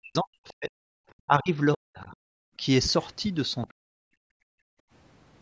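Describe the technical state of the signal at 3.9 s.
Speech suppressed in double talk runs from 3.69 to 3.97 s, so 3.9 s falls inside it. The speech sinks by as much as about 40 dB, with roughly a fifth of a second lost in total. The likely cause is an echo canceller that, with both ends talking together, could not tell this talker from loudspeaker echo and pulled the microphone signal down. The call processing's 8 kHz band limit is normal and not a fault.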